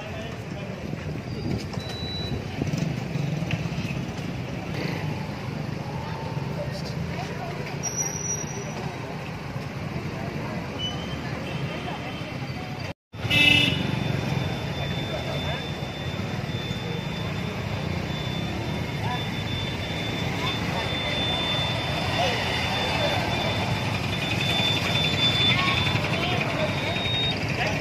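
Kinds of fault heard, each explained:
Loudspeaker feedback squeal: the microphone is hearing the loudspeaker it drives. Near 3.7 kHz the gain around that loop exceeds one, so the tone feeds on itself. At 26.55 s a single whistle appears and swells for most of a second, reaching about 5 dB above the program before it cuts off at 27.35 s. On a spectrogram this is one thin horizontal line at 3.7 kHz that brightens as it grows. On the waveform the envelope rises smoothly over that span.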